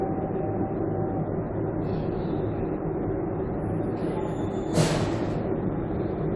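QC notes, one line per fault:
No faults heard.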